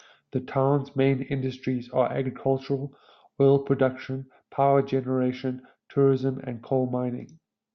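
Listening to the speech recording, nothing technical stood out.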